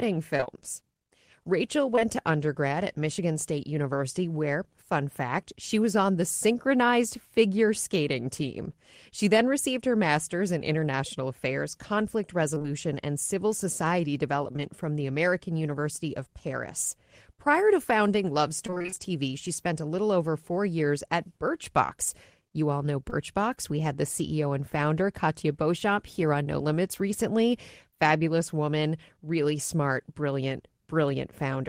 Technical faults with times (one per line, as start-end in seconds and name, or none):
0.37-0.47 repeated packet loss (robotic sound)
1.95-2.03 short concealed packet loss
12.55-12.66 repeated packet loss (robotic sound)
14.52-14.60 short concealed packet loss
18.66-18.98 repeated packet loss (robotic sound)
23.10-23.14 short concealed packet loss